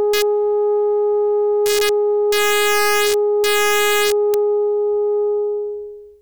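Integer overflow strikes the music at 0.14 to 0.22 s, again at 1.66 to 1.89 s, and across a longer stretch from 2.32 to 4.34 s, where the drive sits about 1 dB hotter. Each loud peak that reaches the integer ceiling wraps to the opposite extreme instead of being held there, so the waveform jumps full-scale. Unlike clipping's flattened, buzzy edge, these land as sudden violent cracks riding the loudest moments.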